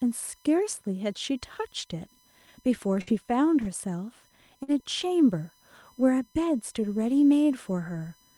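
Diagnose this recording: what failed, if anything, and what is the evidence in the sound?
USB whine, throughout: a fixed 1 kHz tone whose harmonics peak near 6 kHz, roughly 40 dB below the speech. USB frame current is leaking into the analogue wiring via power or ground.

Burst of packet loss, 3.01–3.10 s and 4.63–4.71 s, at the network stage: each gap is bridged by about 50 ms of fading concealment, then speech resumes with 60 ms missing.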